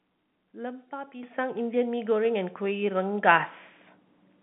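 At 1.23 s the microphone volume stepped up by about 10 dB as software boosted the input; speech and background jump together, a waveform step.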